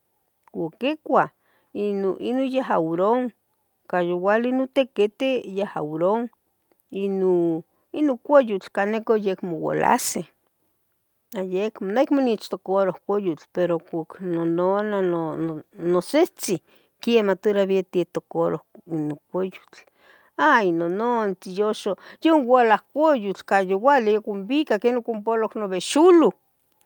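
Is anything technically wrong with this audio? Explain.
No, nothing technically wrong stood out on listening to this recording.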